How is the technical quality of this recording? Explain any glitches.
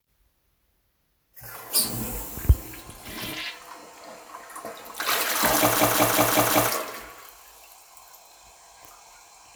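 One glitch affects the recording: a system hang loop from 5.76 to 6.69 s. A short segment of about 186 ms repeats exactly five times at about 5.4 Hz, which fits an 8192-sample buffer. The system froze while the sound hardware kept replaying its ring buffer, producing a machine-gun stutter and dropping about a second of audio.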